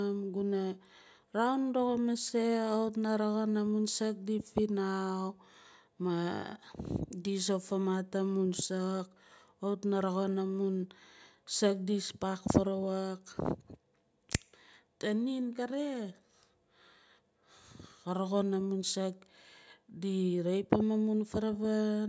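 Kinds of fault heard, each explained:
No technical faults can be heard in the signal at any point in the recording.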